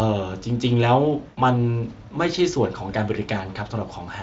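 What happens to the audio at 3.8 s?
Nothing goes wrong at 3.8 s: the speech there comes through intact, carried by the Speex codec at a high setting that leaves at most faint coding damage.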